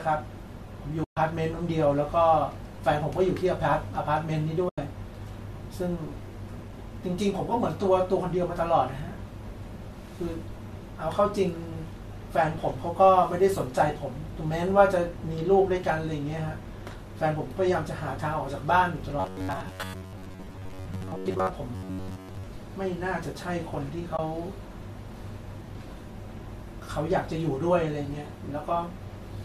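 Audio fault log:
1.04–1.17, 4.69–4.78 and 24.17 s, AAC frame loss with muting: soft-faded holes of 130, 90 and 20 ms, spectrum zeroed, unlike hard dropouts.
19.20–21.50 and 21.75–22.47 s, robotic sound from repeated short buffers: rigid metallic buzz at 93.8 Hz, likely from a roughly 10.7 ms buffer repeated while most new audio is skipped.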